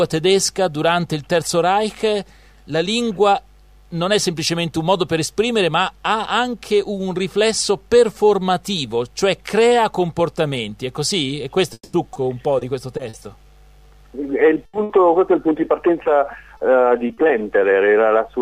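From 11.73 to 13.15 s, repeated packet loss left five gaps, the longest 200 ms, each patched by stretching the previous sound, giving a choppy, robotic stutter with pieces gone. At 14.65 and 14.83 s, a burst of packet loss drops 80 ms, then 60 ms, heard as a brief held, fading tail before the sound skips ahead. From 16.03 to 17.31 s, repeated packet loss returns with five shorter gaps of at most 40 ms, making a lighter, robotic flutter.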